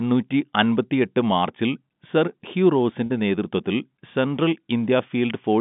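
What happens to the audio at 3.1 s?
Two packets' worth of audio went missing from 3.06 to 3.10 s, about 40 ms, which fits two 20 ms packets. This is packet loss with pitch repetition. The receiver hid the gap by looping the last pitch period it had received. Right after "മാർച്ചിൽ സർ ഹ്യൂ", the sound briefly holds on a slightly buzzy, frozen tone before "നേതൃത്വത്തിൽ സെൻട്രൽ" resumes. All of this sits inside the narrow G.711 telephone band.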